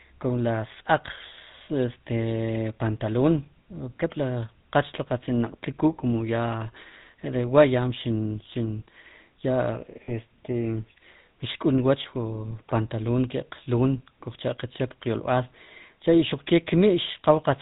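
GSM full-rate coding runs through the whole clip and is plainly audible. The codec rebuilds the voice from a model of the vocal tract fed by a sparse, regularly spaced pulse excitation, which fits a 13 kbps full-rate stream. Everything above 4 kHz is gone, so the speech sounds narrow and dull. The coarse excitation adds a buzzy, gravelly roughness to the voice, most obvious on brighter, higher-pitched sounds.

Lost GSM frames hit at 10.04 to 10.12 s, a gap of 40 ms that fits two missing frames. The decoder covered the gap by reusing the settings of the last good frame and repeating them. Instead of a clean cut, the sound briefly hangs as a rough, metallic ring. Because the loss is so short, this smeared tone is only a brief glitch and does not fade all the way to silence before the speech resumes.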